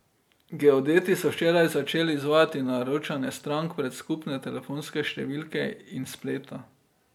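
No technical faults can be heard in this recording.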